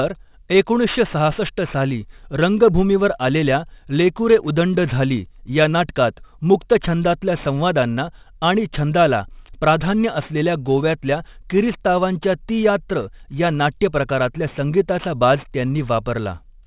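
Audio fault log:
Throughout, aliasing: the speech was dropped to 8 kHz with no filter first, so everything above 4 kHz folds back down, leaving sibilants gritty and metallic, roughly 25 dB below the speech.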